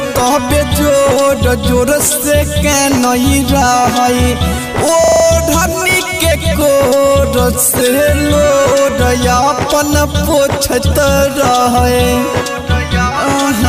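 At 5.04 s the computer or its audio driver briefly stalls while the sound hardware keeps cycling through its ring buffer, a system hang loop. The same 40 ms slice plays exactly five times until 5.24 s, repeating 25 times a second, so the sound turns into a brief, mechanical rattling buzz at that rate. When playback resumes, essentially nothing seems to be missing; the stall inserts the repeats rather than dropping audio.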